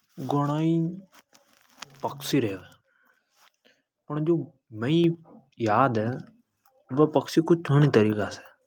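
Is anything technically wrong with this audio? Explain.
Yes. The microphone volume is stepped up twice: by about 5 dB at 5.04 s and by about 3 dB at 6.06 s. Each time, the call software judged the input too quiet and raised the device's input gain in a single step rather than ramping it. Because the change happens before any processing, the speech and the background noise jump together, producing an abrupt, audible rise in loudness.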